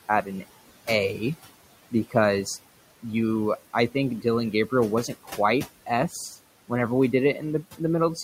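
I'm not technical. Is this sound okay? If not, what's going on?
No. Throughout the clip, a noise suppressor is cutting the background room noise down strongly, frame by frame, which causes noise suppressor artifacts: the noise drops away between words, then comes back underneath them whenever someone speaks, so the background seems to pump.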